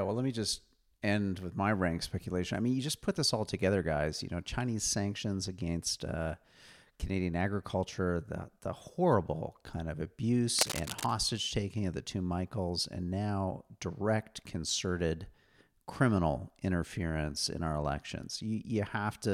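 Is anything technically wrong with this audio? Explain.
Yes, there is one fault. Cable scratch noise runs from 10.58 to 11.13 s, about half a second. A worn cable, plug or control was likely being moved, so its electrical contact kept making and breaking unevenly and added ragged bursts of noise on top of the signal. It is heard as scratching and rustling over the speech, sitting only about 5 dB below it, so it is plainly audible.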